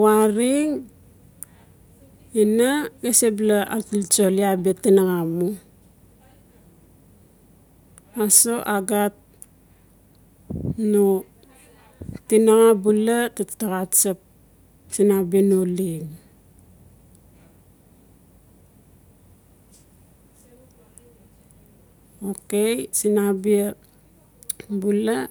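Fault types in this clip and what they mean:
No faults can be heard anywhere in this speech recording.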